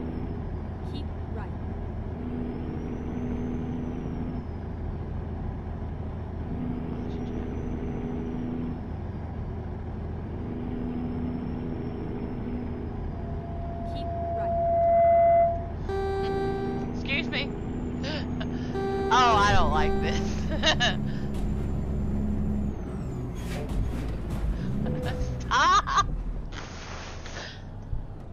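There's a loudspeaker feedback squeal from 13.10 to 15.86 s: a 680 Hz tone swells over around two seconds to about 10 dB above the audio, as the mic picks up its own speaker.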